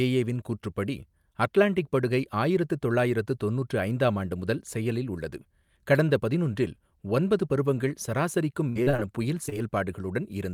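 Speech with audio packets repeatedly lost or delayed between 8.69 and 9.00 s, causing repeated packet loss (robotic sound): each gap, the longest 58 ms, is patched by extending prior sound, so about 41% of that stretch is synthetic and choppy. Shortly after, two short concealed packet losses, at 9.46 to 9.55 s and 9.50 to 9.54 s, each drop about 20 ms before decoding; the filled holes produce a brief smear or wobble, the first also stretching timing very slightly.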